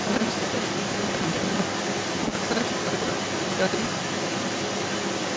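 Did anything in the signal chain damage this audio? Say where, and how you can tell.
Yes. The damage sits in a driver or buffer stage, and it is a block size mismatch (truncated). A steady buzz runs through the whole clip at 188 Hz. The speech also plays fast, at 1.88 times normal speed, yet its pitch stays about where it should be. That combination points to blocks being cut short. One stage writes longer blocks than the next one reads. The tail of each block is dropped, which fits a 256-sample read.

A second voice, the other side's voice leaking through, is present from 0 to 5.37 s. It sits at roughly the same level as the main speech. The stage is call processing. The likely cause is an echo canceller that failed to remove the far end's loudspeaker sound from the microphone. The call microphone processing itself can be heard too, with nothing above 8 kHz.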